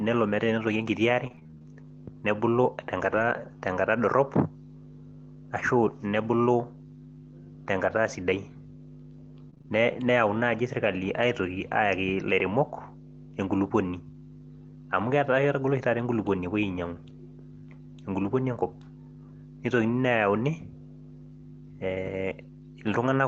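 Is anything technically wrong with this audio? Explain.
Yes. The speech shows repeated packet loss (robotic sound) twice, from 1.27 to 3.22 s and again from 9.50 to 9.67 s. Packets kept going missing, and each hole, none longer than about 23 ms, was patched by stretching the preceding sound before the next hole arrived. The result is choppy sound with pieces missing. A single dropout would be one clean gap. Here the rapid chain of concealed gaps, about half of the second burst, creates the robotic texture, heard over the call path's roughly 8 kHz bandwidth.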